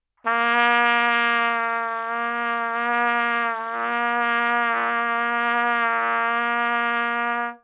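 A recording of everyday sounds, and nothing is technically wrong with it.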